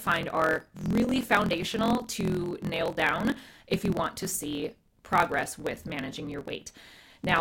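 Throughout, a block size mismatch (truncated) drops every block's tail, which fits 1024-sample reads. Speech buzzes at 43.1 Hz and runs 1.12 times fast, at near-normal pitch.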